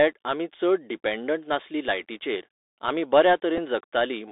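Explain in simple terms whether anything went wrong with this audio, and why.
Bluetooth CVSD headset codec, throughout the clip: the speech passed through a narrowband headset link that sends one up-or-down bit per step. Nothing outside roughly 300 Hz to 3.7 kHz survives, so the speech sounds thin and muffled, s sounds turn scratchy, and a grainy hiss sits underneath.

Bluetooth headset packet repeated, at 3.57 s: a couple of radio packets between headset and phone were lost, and the chip simply replayed the previous packet's data to fill about 7.5 ms. That repeated slice is heard as a brief tick in the speech.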